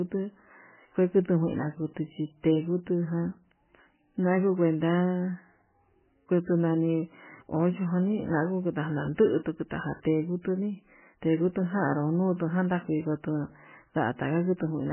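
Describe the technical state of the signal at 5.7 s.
At 5.7 s the speech shows the MP3 compression damage present across the whole clip. Nothing sounds above 3 kHz, and sparse, flickering frequency content gives a watery, swirly texture with smeared onsets. That fits a likely very low bitrate near 10 kbps, starving the encoder of bits.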